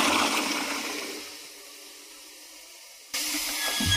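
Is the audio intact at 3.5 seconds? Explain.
No. At 3.5 seconds the audio sits inside a sudden gain jump that begins at 3.14 s and lasts to the end of the clip. At 3.14 s the level rises by about 20 dB from one sample to the next, and the background noise jumps up with the sound. The likely cause is a digital gain setting or bit shift applied instantly with no ramp, so everything after that point is scaled up at once.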